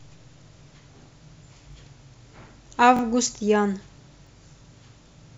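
There are three repeated buffers, at 1.73 to 1.75 s, 2.97 to 3.01 s and 4.27 to 4.29 s. Fresh audio arrived late, so the device replayed its last 21 ms chunk, which fits a 1024-sample buffer. Each sounds like a quick stutter with a hard join, with the chunk heard three times in the middle one.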